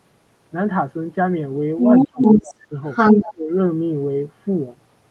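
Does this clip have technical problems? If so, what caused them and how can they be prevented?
Yes. Other side's voice leaking through, from 1.79 to 2.54 s and 2.86 to 3.32 s: the talker's echo canceller likely failed to remove the loudspeaker signal, so a second voice clearly rises over the speech. Using a headset or retuning the canceller's echo path estimation would prevent this.

Speech suppressed in double talk, from 2.04 to 2.73 s and 3.16 to 3.52 s: with both sides talking, the canceller likely treated the talker's speech as echo and turned it down. The voice dips by up to around 30 dB. A canceller with better double-talk detection would keep the near-end speech intact.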